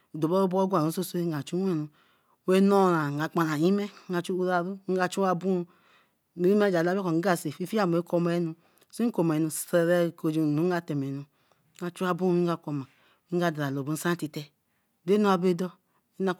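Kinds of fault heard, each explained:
No kind of fault is heard in this clip.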